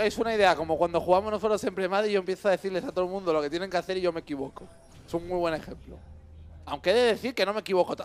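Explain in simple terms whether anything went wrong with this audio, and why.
Nothing went wrong here as far as I can hear, since nothing in this audio stands out as a problem at any point.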